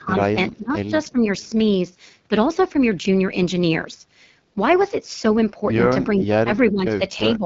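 A speech clip coded throughout with the AMR wideband (HD Voice) codec at 8.85 kbit/s, one of its lowest rates, so it sounds rough and raspy with nothing above 7.5 kHz. At the very start, 0.00 to 0.04 s, there's a very faint delayed copy of the voice, about 386 ms behind, most likely an echo leak from a loudspeaker phone's canceller. The voice also dips at 0.00 to 0.37 s, 0.57 to 0.93 s, 1.12 to 1.24 s, 6.1 to 7.02 s and 7.24 s to the end, with drops of roughly 10 to 20 dB. That's likely speech suppressed in double talk, where the canceller ducks this talker while the far side is speaking too.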